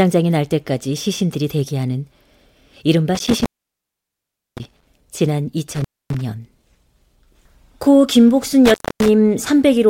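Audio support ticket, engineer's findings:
Intermittent contact, speech, three dropouts: 3.15–4.87 s (line open about 1.1 s), 5.74–6.21 s (about 0.26 s open), 8.66–9.08 s (about 0.26 s open). Symptom: signal cuts out with crackle at both edges. Probable component: loose plug or cable, connection opening under movement. Waveform: abrupt gaps with sharp spikes at entry and exit. Spectrogram: full-band vertical clicks bracketing near-empty regions. Only faint hiss, or possibly mains hum lines, inside the gaps.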